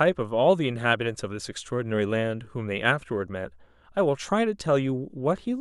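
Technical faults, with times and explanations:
No technical faults can be heard in this speech clip, so there are no times or explanations to give.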